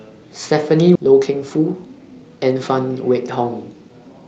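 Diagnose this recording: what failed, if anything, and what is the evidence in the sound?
The fault is a skip ahead at the network or jitter buffer stage. At 0.95 to 0.97 s the speech jumps forward with no gap filled. Around 0.7 s of audio is missing. That stretch was dropped, in transit or by the buffer, while later packets were already queued, so both sides join directly.

A jitter buffer speed-up follows, from 1.06 s to 2.87 s. The speech runs about 14% fast at unchanged pitch and sounds hurried. The buffer was over its target, so it trimmed short pitch-period pieces repeatedly, removing roughly 0.3 s to reduce delay. The audio passes through an Opus call codec with an upper limit near 8 kHz.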